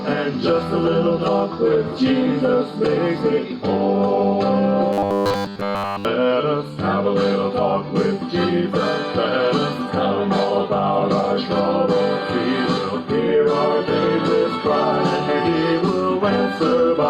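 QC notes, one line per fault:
4.93–6.05 s, robotic sound from repeated short buffers: for just over a second the sound becomes a rigid, metallic buzz fixed at 100 Hz, with essentially all of the passage replaced by repeats. The likely cause is new audio arriving too late, with the last 10 ms looped to fill the gap. Unlike a dropout, the sound never goes silent, and unlike a general metallic colouring, the buzz holds one steady pitch set by the loop length.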